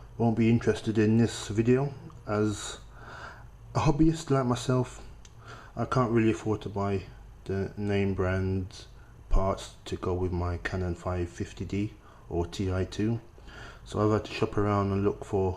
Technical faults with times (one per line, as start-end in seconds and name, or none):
none